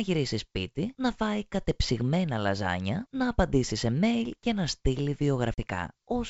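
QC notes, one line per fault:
5.54–5.60 s, packet loss on an ADPCM call: after "mail και να στείλει", a sharp-edged 40 ms silent gap (about two packets) appears as a blank spectrogram column. The desynchronised decoder predictor brings speech back slightly distorted.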